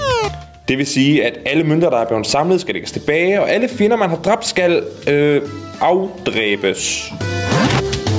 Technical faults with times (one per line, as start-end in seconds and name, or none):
0.00-8.19 gain pumping